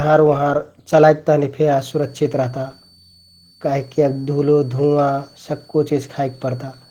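From the start, the speech carries Opus voice compression damage: a plainly hoarse, slightly robotic texture from coarsely coded excitation. The band still reaches about 20 kHz, so it is not muffled, which fits hybrid SILK-plus-CELT coding at around 16 kbps in 20 ms frames.

From 1.79 s to the end, a switching supply whistle sits around 4 kHz, roughly 35 dB below the speech. Its pitch wanders between 4.43 and 4.56 kHz as the supply's load shifts, unlike a fixed mains hum or a ringing feedback tone.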